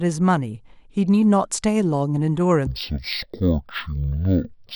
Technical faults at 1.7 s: none

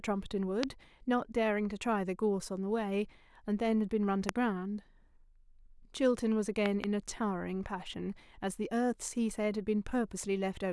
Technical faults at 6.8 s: loud pop

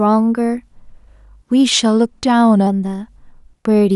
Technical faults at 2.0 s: drift correction step

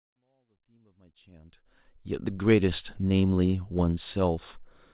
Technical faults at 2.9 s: none

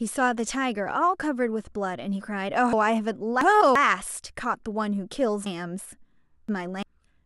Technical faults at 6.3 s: chunks out of order

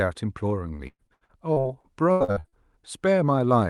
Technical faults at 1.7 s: repeated packet loss (robotic sound)

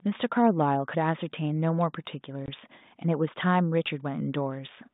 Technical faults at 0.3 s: none

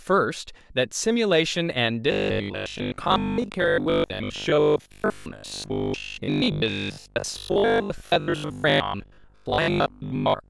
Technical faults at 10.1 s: robotic sound from repeated short buffers

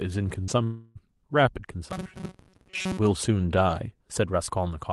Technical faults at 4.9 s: none

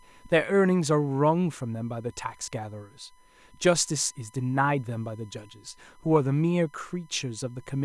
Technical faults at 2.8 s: USB whine

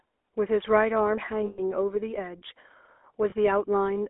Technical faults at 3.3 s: GSM full-rate codec; lost GSM frames

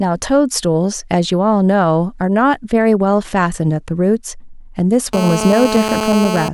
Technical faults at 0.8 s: none

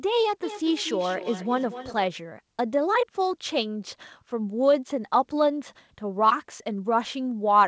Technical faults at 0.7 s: feedback echo between two devices

